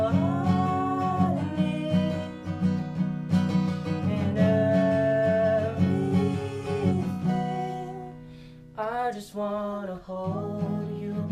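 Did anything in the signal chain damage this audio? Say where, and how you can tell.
No, nothing along the chain seems to have damaged it, and I can't hear anything worth tracing back to a particular stage.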